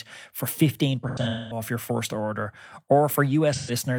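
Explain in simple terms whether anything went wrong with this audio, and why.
Two patches of the speech turn smeared and hollow, as if the sound briefly blurs and thins out. The first runs from about 1.09 to 1.61 s, with the longest dropout around a fifth of a second, and the second, shorter one from 3.53 to 3.71 s. This is AAC frame loss with concealment: chunks of the compressed audio went missing, and the player papered over the holes by reusing and reshaping the last sound it had, which leaves that blurry, noisy texture.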